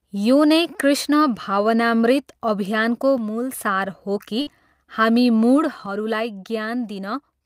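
From 3.18 to 3.53 s the speech suddenly drops by about 6 dB and then jumps back. The same step down returns at 5.86 s and lasts to the end of the clip. The likely cause is one channel dropping out: one side of the stereo feed disappears, so the mono sum keeps only half of the shared signal. Nothing is skipped or smeared, and timing stays continuous. That separates it from a network gap, because only the level changes.

The burst of packet loss at 4.41 to 4.49 s is different. For about 51 ms the receiver stretches the last received sound into a short held tail and fades it out. Playback then resumes about 60 ms further on. The gap removes part of the speech instead of lowering its level, which marks it as lost packets and not a channel fault.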